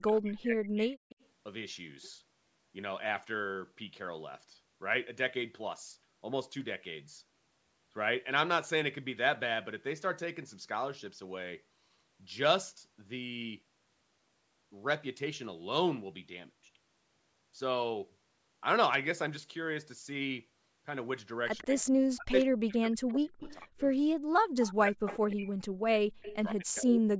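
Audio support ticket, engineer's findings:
Speech suppressed in double talk, 0.00–0.95 s, 21.63–23.81 s, 24.66–27.19 s. Voice dips about 40 dB, drops out in pieces. Likely echo canceller clamping both talkers during overlap.

Echo leak, 0.95–1.26 s, 21.58–21.80 s, 24.59–25.32 s, 26.24–26.51 s. Delayed voice copy 139 ms behind, about 30 dB down at first, rising to about 15 dB down. Likely residual loudspeaker echo passing the canceller.

Background gated by the echo canceller, 24.11–24.26 s. Room tone drops about 40 dB for 150 ms, then returns. Canceller ducking the microphone while the loudspeaker plays.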